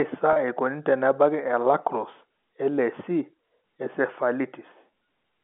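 At 0.33 s, just before "eikoni tenebaki e", packet loss with pitch repetition fills a 30 ms gap, consistent with a single lost packet, by repeating the last pitch period. It sounds like a brief held, buzzy sustain rather than a silent dropout or click, heard through the 200 to 3400 Hz band of the G.711 line.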